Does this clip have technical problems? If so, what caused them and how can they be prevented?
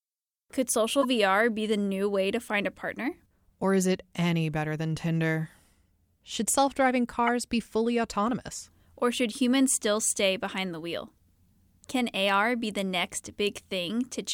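Yes. Corrupt frames were decoded: flipped bits in a couple of compressed frames at 1.02 to 1.05 s and a few more at 7.27 to 7.29 s, between "self driving" and "be fully autonomous", produced wrong gains and codes that sent energy to the wrong frequencies. Each is heard as a brief glitch, peaking around -20 dBFS and then around -10 dBFS. Prevention: protect the bitstream with checksums or error correction so damaged frames are concealed rather than played.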